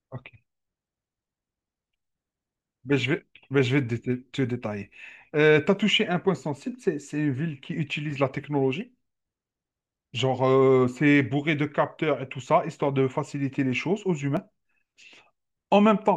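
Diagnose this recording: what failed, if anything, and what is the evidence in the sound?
At 14.37 s the speech jumps abruptly with no gap, a few milliseconds of audio simply missing. This is likely a dropped buffer (overrun) at the driver or buffer stage: the hardware overwrote samples before the software read them, splicing the two sides together.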